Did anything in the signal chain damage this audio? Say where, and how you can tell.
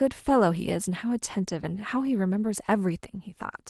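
No, nothing in the chain damaged this speech; the top end rolls off around 12 kHz, as expected from a call path consistent with Opus at roughly 20 kbps, and that is normal for such a link.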